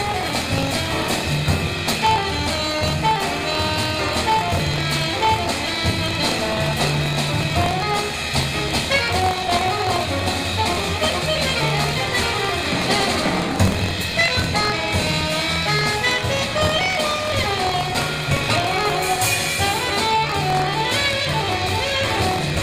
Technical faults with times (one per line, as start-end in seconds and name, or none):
0.00-22.63 buffer tearing